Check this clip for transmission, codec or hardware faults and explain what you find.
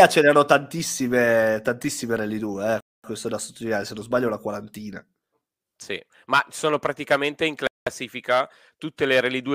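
Two short dropouts in the speech, both with the signature of a Bluetooth stall. The audio cuts to silence from 2.80 to 3.04 s and again from 7.67 to 7.87 s, then resumes where it stopped. The likely cause is radio interference delaying packets so the headphone buffer ran dry.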